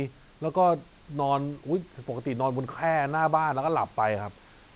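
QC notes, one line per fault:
Nothing stood out on listening to this speech recording.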